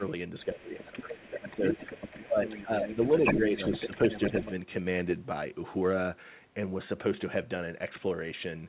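From 0.45 to 1.64 s the speech drops by roughly 10 dB for about a second in total. This is speech suppressed in double talk, likely from an echo canceller that turned everything down while both sides spoke. On the waveform it shows as a pinched envelope. The same dips return at 2.25 to 2.98 s, deepest around 15 dB, and at 3.37 to 4.33 s, around 10 dB, each lasting about 0.3 s.

From 0.63 to 4.51 s the other side's voice is leaking through, likely as loudspeaker echo the canceller missed. It sits about 10 dB under the main speech and shows as faint, overlapping harmonic traces on the spectrogram. The whole band stops at 4 kHz, which fits a G.711 A-law call path.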